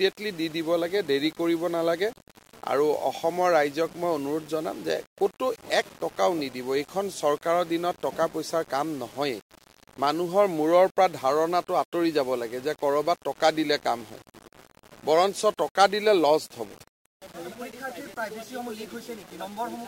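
Low bit depth without dither is the likely cause: the audio was rounded to 7 bits with no dither. Throughout the clip, the quantisation error follows the signal at roughly 25 dB below it, so quiet passages turn gritty and the faintest parts sputter or drop to silence.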